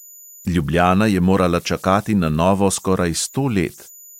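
Converter idle tones run throughout: an undithered delta-sigma converter cycles through bit patterns, adding a whistle around 7 kHz, about 29 dB below the speech, visible as a thin horizontal spectrogram line.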